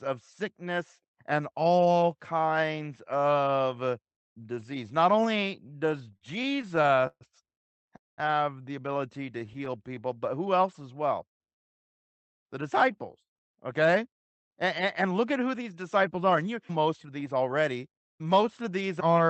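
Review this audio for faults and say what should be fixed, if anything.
Packets reached the receiver late or too slowly between 5.67 and 7.23 s, and again from 9.32 to 9.68 s, so the jitter buffer kept running empty. These are repeated stalls (stutter). In the first span, 19 gaps were filled by continuing the last sound, with the longest lasting 138 ms and concealment covering about a fifth of the span. The second span had six short gaps. Nothing is lost, but the speech drags and stutters.

From 7.97 to 8.20 s the speech stops and is held as a brief fading continuation, then about 190 ms of silence, before it resumes exactly where it left off. This is a call audio freeze, likely caused by packets held up in transit that emptied the jitter buffer and pushed playback about 211 ms later.

Right after the second stutter, from 9.70 to 10.19 s, the buffer was still short. To rebuild its reserve, the receiver repeated pitch periods and added about 68 ms of audio. 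This is a jitter buffer slow-down: the speech plays at 88% speed with unchanged pitch and sounds drawn out.

Later the buffer held more than its target. From 11.95 to 17.36 s the receiver trimmed short pieces, removing around 0.3 s in total. This is a jitter buffer speed-up: the speech runs at 106% with the same pitch and sounds slightly hurried. The Opus band limit near 8 kHz belongs to the normal call path.

To prevent these faults, fix the network path that delays and bunches packets, and give the jitter buffer enough headroom that it neither runs dry nor overfills.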